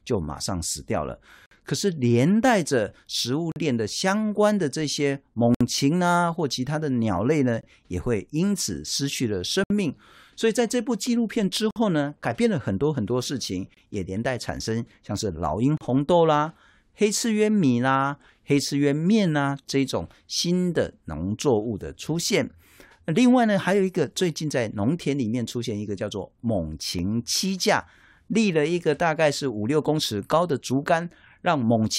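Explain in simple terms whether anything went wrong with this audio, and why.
Gaps between stream segments at 1.46, 3.52, 5.55, 7.61, 9.64, 11.71, 13.74 and 15.77 s. This speech was delivered in 2-second pieces, and each time one piece handed over to the next, the timing left a small hole of about 20 to 65 ms that the player filled with silence. You hear a brief, sharp-edged dropout roughly every two seconds. Nothing is actually missing; the speech is simply pushed later by each hole.

Blocks of digital silence at 25.05 s and 26.99 s. Here a tiny run of the audio was replaced by pure silence, about 2.7 ms the first time and under 1 ms the second, most likely because the playback program didn't refill its output in time. The sound drops to nothing and jumps back with no fade, so each one is heard as a small tick or click rather than a hole.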